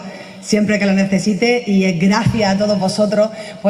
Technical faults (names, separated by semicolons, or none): clock drift between sender and receiver; repeated timing corrections